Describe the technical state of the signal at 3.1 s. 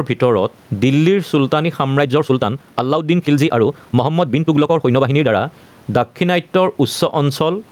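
At 3.1 s the speech sits inside a time-stretched section running from 1.95 s to 5.39 s. Processing has likely squeezed this stretch to about 1.59 times its original speed, keeping pitch constant by discarding short slices of the waveform rather than resampling. The pace therefore jumps abruptly at 1.95 s and relaxes again at 5.39 s, and throughout the span the speech sounds rushed while its pitch stays where it was.

Gain pumping is also present at this moment, as it is across the whole clip. The input gain is likely set far too high, so a fast limiter or compressor drags the level down on every loud syllable and releases it in the gaps, with a swing of roughly 15 dB. The room noise sits about 40 dB below the speech, and the dynamics are left squashed.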